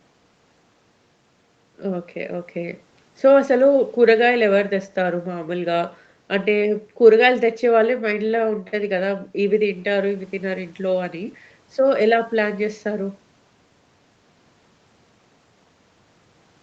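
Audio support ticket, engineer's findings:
No faults found: the speech comes through the call's microphone processing and the Opus call path as you'd expect, with nothing above 8 kHz, which is just where that path's bandwidth tops out.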